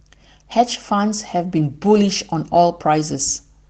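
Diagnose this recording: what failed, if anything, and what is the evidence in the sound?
Network-stage fault: lost packets rebuilt from error correction at 0.55–0.65 s and 1.95–2.09 s. Both stretches sound briefly rougher and noisier but leave no gap or smeared repeat, unlike plain concealment. Their 60 ms and 80 ms of rebuilt audio fit three and four separate lost 20 ms Opus packets replayed from low-bitrate redundant copies.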